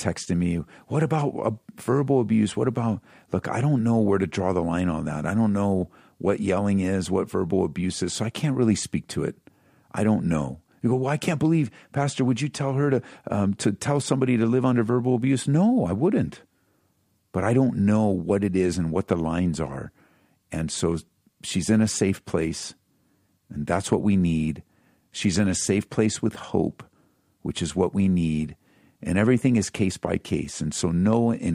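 A gain stage is being driven slightly past its ceiling, so the loudest peaks of the speech are sliced flat, which is hard clipping. The first instance, at 19.12 s between "it is and what" and "lines are", overshoots by about 2 dB and is a brief crackle. From 23.73 to 23.95 s, just before "we need", the same overshoot of about 2 dB lasts longer and gives a crackle on the peaks. At 31.13 s, a lighter overload of about 1 dB leaves a crackle on a peak.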